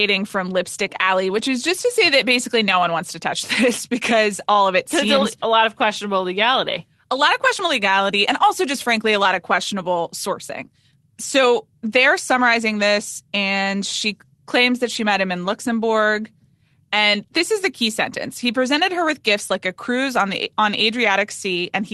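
No technical faults heard.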